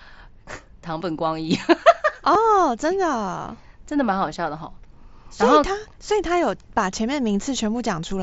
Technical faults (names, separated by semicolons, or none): concealed Bluetooth headset packet loss